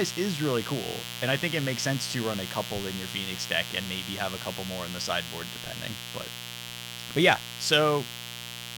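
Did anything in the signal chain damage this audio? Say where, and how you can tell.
Yes. A mains buzz sits under the speech for the whole clip, at roughly 10 dB below it. It is a raspy, steady buzz built on 60 Hz. Switching spikes twice per mains cycle leaked into the analogue wiring, spraying harmonics up to several kHz.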